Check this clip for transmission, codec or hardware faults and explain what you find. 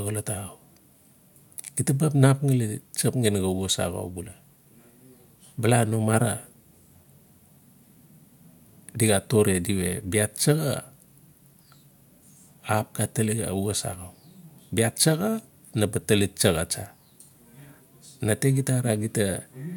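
No transmission, codec or hardware faults can be heard here; the speech signal comes through intact, with no interruptions or distortion in the path.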